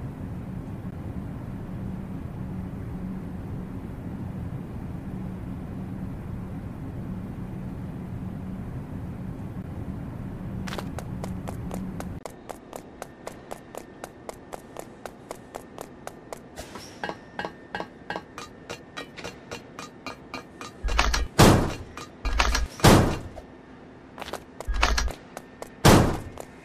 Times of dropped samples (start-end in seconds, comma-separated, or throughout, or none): 11.37, 15.81, 25.19